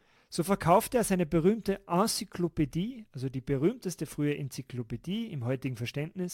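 Sample clock jitter runs throughout. A few microseconds of timing wobble adds a hiss roughly 30 dB below the speech. It shows as broadband haze over loud, bright syllables and vanishes in pauses.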